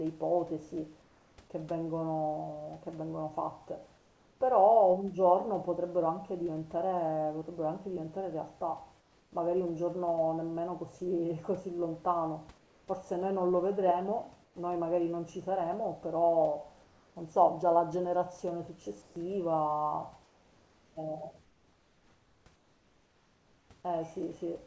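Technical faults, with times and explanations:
1.02–1.38 s, 3.98–4.40 s, 9.00–9.32 s, 12.58–12.88 s, 14.44–14.56 s, 16.84–17.16 s, 19.02–19.16 s and 20.24–23.70 s, comfort noise in place of the background: in the pauses the room's textured noise becomes a smooth, featureless hiss about 2 to 7 dB quieter, likely from discontinuous transmission with synthetic fill. Unlike a gate or dropout, the pause never falls silent.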